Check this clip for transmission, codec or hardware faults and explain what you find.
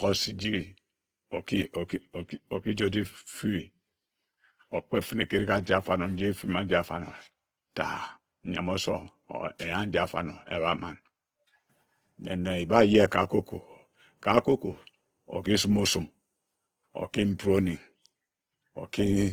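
One codec fault runs through the whole clip. From start to finish the speech sounds grainy and rough, with tonal parts of the voice turned noisy and hissy. The damage is plainly audible, yet the bandwidth stays full, reaching about 20.2 kHz. That points to Opus compression, likely in its music-oriented CELT mode at a low rate that fits around 16 kbps. Short of bits, the encoder keeps each band's energy but fills the detail with folded copies or noise. That produces this texture rather than muffling.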